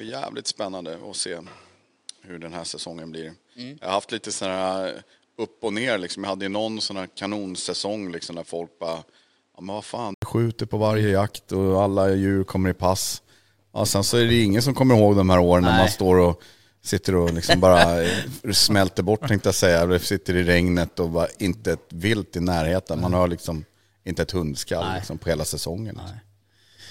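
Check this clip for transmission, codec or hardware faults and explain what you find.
One fault is present in this speech clip: an input switched to a poorer device. From the start to 10.22 s, the sound is band-limited, with nothing above 10.2 kHz. It is also somewhat quieter and carries its own faint background noise, well below the speech. At 10.22 s there is an 80 ms silence. Then the full-band sound returns on "skjuter på varje jakt". The cause is likely a capture path that began on a narrower secondary device before switching back to the main microphone.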